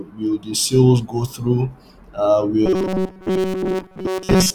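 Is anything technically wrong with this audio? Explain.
Yes. From 2.66 s to the end of the clip at 4.54 s, the speech collapses into robotic sound from repeated short buffers: a rigid, metallic buzz fixed at 188 Hz that only loosely tracks the speech. The likely cause is audio arriving too seldom, so a chunk of about 5.3 ms, which fits the 188 Hz rate, is replayed to fill most of the gap. A spectrogram shows evenly spaced horizontal harmonics at multiples of 188 Hz, and the waveform shows identical cycles repeating every 5.3 ms.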